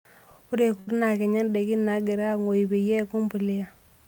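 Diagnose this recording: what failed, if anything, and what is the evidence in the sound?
The network stage failed, with a burst of packet loss in the speech at 0.79 to 0.89 s. The receiver bridged about 75 ms by extending the last sound and letting it fade, so it turns into a held, dying tone or hiss. The talk then jumps ahead, with about 80 ms of speech gone. On a spectrogram the frequency pattern freezes into flat stripes that thin out, and then the normal pattern returns with an abrupt edge. The waveform shows a repeating, decaying shape before the restart.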